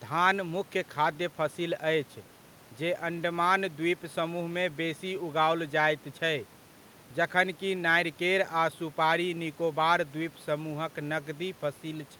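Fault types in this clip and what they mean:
Nothing stood out on listening to this speech, apart from a faint room background well beneath it.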